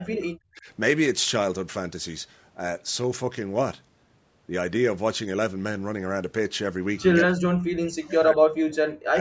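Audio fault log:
0.00–0.68 s, speech suppressed in double talk: the talker drops sharply right from the start, by about 35 dB at worst, and comes through thin and broken, most likely because the echo canceller took overlapping far-end audio for echo and turned everything down.
7.26–9.18 s, speech suppressed in double talk: the same ducking returns deeper, about 40 dB, chopping around a second and a half of the talker into gappy, dull fragments as the canceller likely clamps down again.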